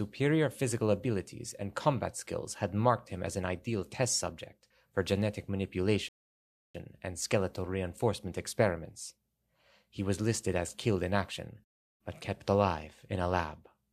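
At 6.09 s the speech stops dead for a rebuffering stall: playback ran dry and waited about 0.66 s, to 6.75 s, before resuming exactly where it halted. The waveform shows a flat silent gap, the spectrogram a clean blank band, with nothing missing either side.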